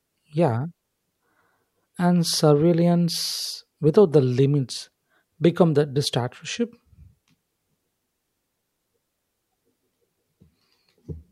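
Nothing in the recording stood out as a technical fault on listening.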